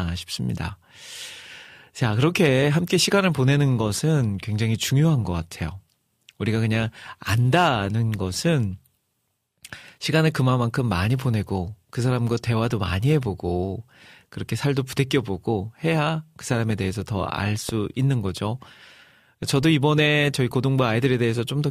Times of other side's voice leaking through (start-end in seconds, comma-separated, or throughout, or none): none